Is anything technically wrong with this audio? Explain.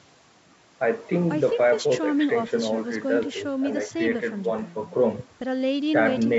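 No, nothing is technically wrong: this speech has been through ordinary call microphone processing, which trims the lowest bass and leaves nothing above 8 kHz, and that is expected behaviour rather than a defect.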